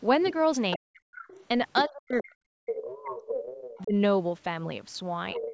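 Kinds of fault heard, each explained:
Other side's voice leaking through: a second, fainter voice sits under the main speech, in short scraps at 0.24 and 0.71 s, then in longer stretches from 1.15 to 1.84 s, 2.67 to 3.83 s and from 5.34 s to the end. It runs roughly 10 to 20 dB below the talker. It is likely loudspeaker echo the canceller failed to remove. Unlike room reverberation, it is a separate voice, not a smeared copy of the talker.
Speech suppressed in double talk: the main voice sinks sharply, by as much as around 40 dB, while the other side is talking. This happens from 0.77 to 1.17 s, across much of 1.87 to 3.94 s, and more gently from 5.34 to 5.49 s. The likely cause is the echo canceller turning both talkers down when it could not separate them. Unlike a network dropout, the gaps line up with the other side's speech rather than falling at random.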